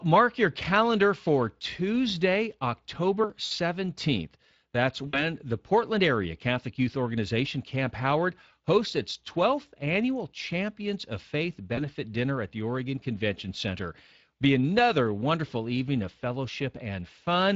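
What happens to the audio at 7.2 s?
At 7.2 s you're hearing Speex codec damage, which runs through the whole clip. The CELP coder is short on bits for the excitation signal, so the speech comes out noticeably noisy and hoarse, consistent with a bitrate of around 20 kbps.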